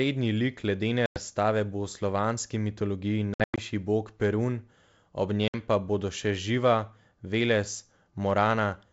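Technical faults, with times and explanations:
1.06 to 1.19 s, packet loss on an ADPCM call: a 100 ms stretch, roughly five packets, drops to silence, a flat gap in the waveform and a blank vertical band on the spectrogram. Speech resumes with brief distortion, because the decoder's predictor and step size have drifted from the sender's until they realign.
3.34 to 3.63 s, packet loss on an ADPCM call: just after "slovanski mitologiji", about 180 ms, roughly ten packets, goes missing, scattered across 240 ms with the longest hole 100 ms. Several hard-edged blank bands appear, each followed by slightly distorted speech as the mismatched ADPCM state recovers.
5.48 to 5.55 s, packet loss on an ADPCM call: a 60 ms hole, around three packets, just before "pa bodo še", a sharp-sided empty slot in waveform and spectrogram. The return is slightly distorted while the desynchronised predictor and step size catch up within tens of milliseconds.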